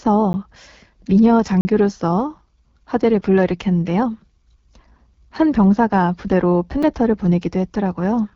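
Speech runs through the AMR wideband (HD Voice) codec at 8.85 kbit/s, one of its lowest rates. The voice sounds rough and raspy, with nothing above about 7.3 kHz. Three blocks of digital silence cut in: a tick at 0.33 s, a 40 ms hole from 1.61 to 1.65 s, and a tick at 6.83 s. The gaps point to the output buffer not being filled in time.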